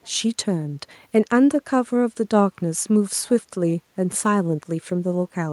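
A speech clip with a very faint, delayed copy of the voice surfacing from 0.02 to 0.1 s, trailing the original by about 330 ms. This echo leak likely comes from a far-end loudspeaker whose echo canceller let residual microphone pickup be sent back.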